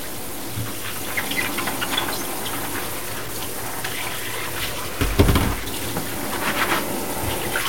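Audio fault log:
throughout, low bit depth without dither: coarse grainy distortion tracks the sound, quiet parts sputter or drop out, likely from truncation to about 5 bits.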